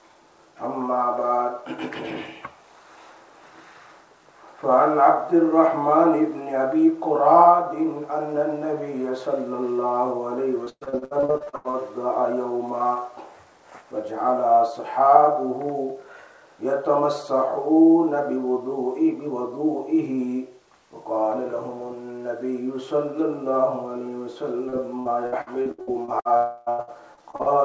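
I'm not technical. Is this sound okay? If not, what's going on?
No. From 10.64 to 11.76 s, and again from 24.69 to 26.28 s and 26.69 to 27.49 s, you hear repeated packet loss (robotic sound). Bits of audio went missing over and over, and each hole was patched by stretching the previous sound. The result is choppy and robotic.

From 26.37 to 26.69 s there is a smeared buzz or hiss with no real sound. That fits a long network dropout, likely. Nothing arrived for about a third of a second, so the gap was filled with a stretched copy of the last sound.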